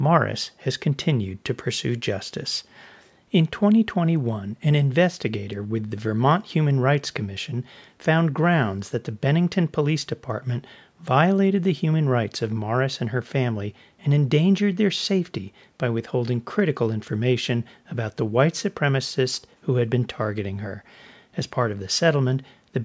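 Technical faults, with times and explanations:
No technical faults.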